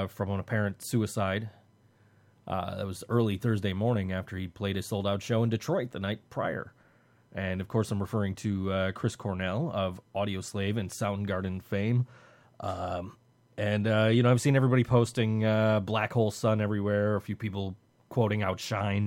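Speech recording; no technical faults can be heard.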